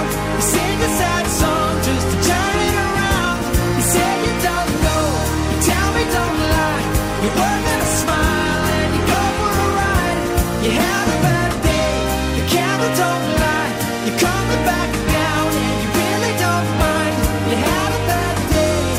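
At 3.21 s the audio falls to an adaptive stream at a lower bitrate for 8 s, until 11.21 s. The connection likely slowed, so the player switched to a leaner encoding, which fits a drop from about 64 to 32 kbit/s Opus. Codec artefacts rise during this stretch. Unlike a dropout or buffering stall, the change is sudden but seamless, and full quality returns just as abruptly.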